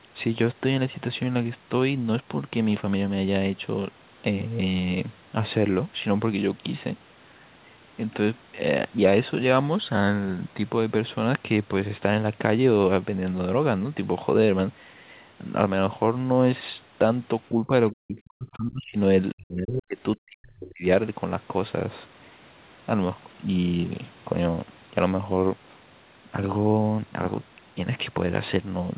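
From 17.52 to 17.71 s the speech dips by about 10 dB, then nearly vanishes, around 40 dB down, at 17.91–18.97 s, 19.34–19.98 s and 20.16–20.84 s. This is speech suppressed in double talk, likely an echo canceller mistaking the talker for loudspeaker echo.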